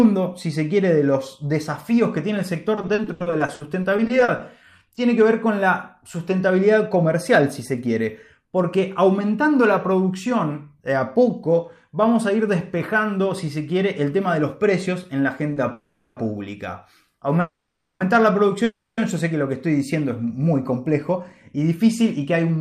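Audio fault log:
2.75–4.98 s, repeated packet loss (robotic sound): 19 short holes open in quick succession, the longest 80 ms. Each is patched by extending the preceding sound, so about 23% of the stretch is filler and some 340 ms is lost outright. The result is choppy. Unlike a stall, real material is missing.
6.86–9.21 s and 20.79–22.58 s, jitter buffer speed-up: the receiver cut back excess buffered delay by removing pitch-period-sized slivers again and again. The first stretch runs at 103% speed with roughly 70 ms removed, and the second at 106% with about 100 ms removed. Pitch stays put while the pace hurries, which is what separates this from a simple rate change.
15.53–15.58 s, short stall from a late packet: a packet arrives late and the buffer runs empty for a moment. The last sound is held for about 30 ms, then playback resumes from the same point with nothing lost. It is far briefer than the freezes that follow.
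15.72–16.18 s, 17.40–18.02 s and 18.64–18.99 s, call audio freeze: the last sound carries on as a fading buzz or hiss for 440, 600 and 330 ms. The second and third freezes trail into 40 ms and 60 ms of silence before the audio resumes where it stopped. The likely cause is held-up packets emptying the buffer. Nothing is missing, unlike packet loss.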